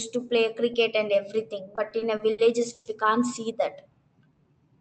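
Speech carried over a WebRTC call path, band-limited to about 8 kHz with the coding texture of a call codec such as Opus. Between 1.75 s and 2.88 s it suffers repeated stalls (stutter): six times the jitter buffer ran dry and the receiver stretched the last sound to cover the wait, filling 260 ms in all, with the longest hold about 110 ms. Unlike packet loss, nothing is skipped. Each halt resumes exactly where it stopped, so the passage drags rather than jumps. From 4.16 s to 4.54 s a jitter buffer slow-down follows, as the receiver repeated single pitch periods to rebuild its reserve, adding 64 ms and running at 85% speed. Where the stutter halts and restarts, this stretch flows continuously, drawn out at unchanged pitch.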